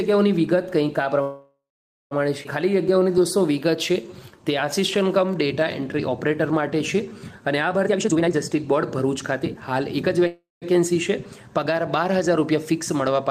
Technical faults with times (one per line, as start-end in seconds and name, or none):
1.21-2.13 call audio freeze
2.43-2.47 skip ahead
2.69-7.79 jitter buffer slow-down
7.86-10.27 jitter buffer speed-up
10.27-10.64 call audio freeze